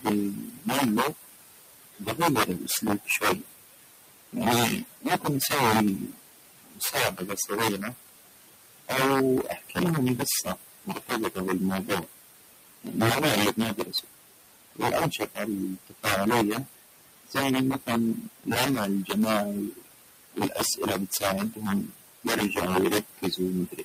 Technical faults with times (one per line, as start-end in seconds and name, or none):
0.00-23.84 integer overflow
0.00-23.84 noise suppressor artifacts
0.01-7.94 speech cut by the noise suppressor
8.88-23.84 speech cut by the noise suppressor